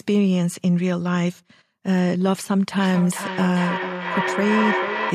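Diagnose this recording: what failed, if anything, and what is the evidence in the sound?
Call processing failed here: a feedback echo between two devices. A second device in the same room is replaying this microphone's signal, and this end picks it up again, outside what its own echo canceller can remove. From 2.79 s to 5.14 s the speech returns at a fixed spacing of roughly 0.4 s. The repeats reach about 4 dB below the direct speech.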